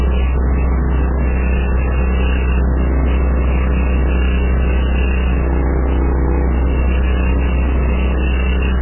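Throughout the clip, likely MP3 compression at a starved bitrate, which fits around 8 kbps, is cutting away everything above 3 kHz and dropping weak frequency lines frame by frame. The sound is dull and heavily damaged, with a watery, swirling texture and smeared attacks.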